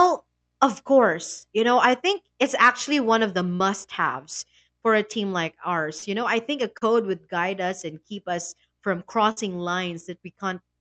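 Around 3.55 to 3.62 s, 5.98 to 6.04 s and 6.78 to 6.83 s there's short concealed packet loss. Roughly 40 ms never arrived each time, and the receiver papered over it with a brief smear. At 9.31 to 9.38 s a burst of packet loss drops about 60 ms. The last sound gets stretched and faded before the speech jumps ahead.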